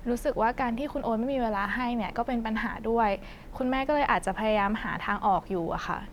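No technical faults can be heard anywhere in the recording.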